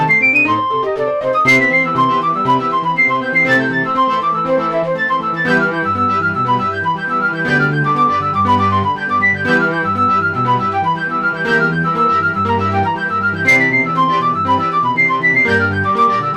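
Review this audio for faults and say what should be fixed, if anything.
A stage in the chain was driven about 6 dB past its ceiling throughout, so the loudest peaks are sheared flat: hard clipping. Only a small fraction of samples, well under one percent, hit the limit, so it sounds like crackle on peaks rather than constant fuzz. To prevent it, lower the gain ahead of the overloading stage, or add a limiter there, so peaks stay below full scale.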